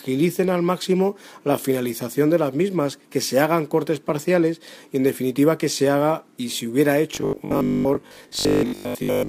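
Around 4.1 s there's a repeated buffer: fresh audio didn't arrive in time, so a 5 ms chunk got played one extra time with a hard join. Nothing seems to be lost, but a chunk that short comes across as a quick click or brief buzz.

From 7.15 s to the end the sound goes robotic, turning into a rigid, metallic buzz at 50 Hz that only loosely tracks the original. The likely cause is repeated short buffers: roughly 20 ms pieces replayed to cover most of the stretch while the real audio is skipped.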